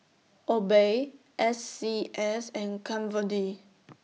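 No technical faults can be heard anywhere in the speech recording, and the signal stays steady and continuous throughout.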